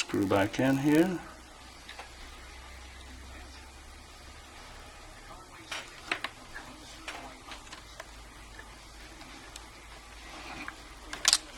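Block size mismatch (padded) runs from start to end: one stage hands on blocks slightly shorter than the next reads, the remainder is zero-filled, and each inserted gap repeats at 91.5 Hz, giving a steady buzz while the audio plays 0.996 times as fast.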